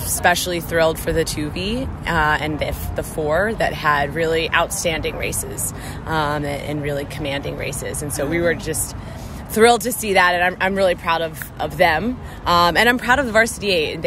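No technical faults detected.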